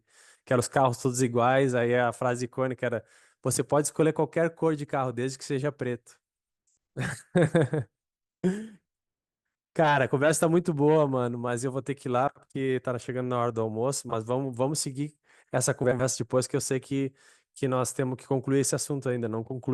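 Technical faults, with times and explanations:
12.27–12.45 s, 14.09–14.14 s and 15.84–16.02 s, frames out of order: in each case two adjacent runs of coded frames reached the decoder swapped and were played in that order. The first and third swaps each exchange two blocks of about 80 ms, and the middle one exchanges two blocks of about 20 ms. These sizes are consistent with 20 ms frames. Each stretch of speech comes out with its halves reversed, so it sounds like a brief garbled flutter. No time is lost.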